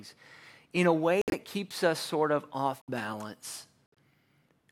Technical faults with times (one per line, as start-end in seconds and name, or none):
1.21-1.34 corrupt frame muted
2.81-2.89 corrupt frame muted
3.86-3.98 corrupt frame muted